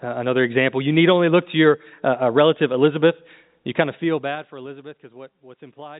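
From 3.81 to 4.92 s, a gain reduction is applied in coarse 3 dB jumps instead of a smooth ramp, about seven steps a second, pulling the speech down by roughly 20 dB. Each abrupt jump leaves a small discontinuity in the waveform, so the fade carries a faint ticking or zipping texture: classic zipper noise. It rides on the telephone-band speech, which has nothing above 3.8 kHz.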